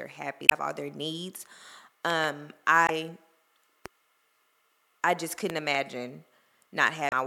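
Damaged data in a compressed stream at 0.46 to 0.52 s, just before "all their needs": corrupted bytes make the decoder lose frame sync, producing a brief glitch. At 2.10 to 2.26 s comes a loud pop, heard as two sharp pops about 15 dB above the speech, which carries on underneath. They likely come from a sudden voltage step, such as a plug, a switch or static. Damaged data in a compressed stream returns at 2.86 to 2.90 s as a brief glitch while the decoder hunts for the next valid frame header. A single loud pop at 3.86 s stands about 10 dB above the signal, likely from the same kind of electrical transient. Another double loud pop follows at 5.50 to 5.77 s, right after "I just", about 15 dB above the speech, likely caused by a switching or driver glitch. Finally, damaged data in a compressed stream at 7.09 to 7.13 s gives a last brief glitch from misread frames.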